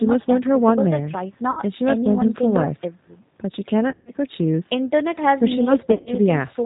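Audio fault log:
throughout: G.729 codec. The speech passes through an 8 kbit/s G.729-type coder that rebuilds it from a vocal tract filter, a pitch predictor and a few pulses per frame, so nothing above 4 kHz survives and the voice sounds rough and plainly synthetic.
1.51–1.62, 3.90–4.11, 5.92–6.11: VoIP packet loss concealed by the speech codec. Gaps of about 60 ms, then 140 ms scattered over 180 ms, then 120 ms over 140 ms were filled by the decoder stretching its last pitch and filter, giving fading buzzy tones or coloured noise and weak, distorted speech as recovery lags.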